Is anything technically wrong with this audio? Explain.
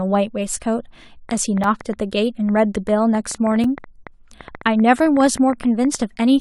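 Yes, there are two problems.

A train of clicks runs from 1.29 s to 6.03 s: roughly 40 near-identical pops at about 7.4 per second, spaced unevenly, peaking about 5 dB above the speech and audible in pauses too. Interference or a faulty connection or power supply is the likely source. Their matching shape separates them from random crackle.

Two gaps between stream segments fall at 1.64 s and 3.64 s, 2 s apart, matching the segment length. Segment timestamps leave a space that the player fills with silence, 4.2 ms and 4.8 ms, giving hard-edged holes. Unlike a dropout, no audio is lost; it simply resumes slightly later.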